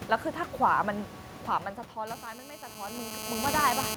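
From 2.07 s to 3.95 s, a hard, raspy 217 Hz buzz full of harmonics sits steadily under the speech, only about 5 dB below it. This is GSM phone buzz: a nearby 2G phone on a call pulses 217 times a second, and the audio circuitry rectifies those bursts.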